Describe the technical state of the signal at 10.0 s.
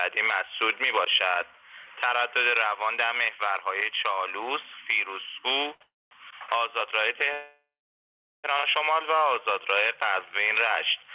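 At 10.0 s the audio is intact, with the call path behaving as expected: the band stops at 4 kHz, which fits a narrowband telephone codec such as G.711 mu-law at 64 kbps.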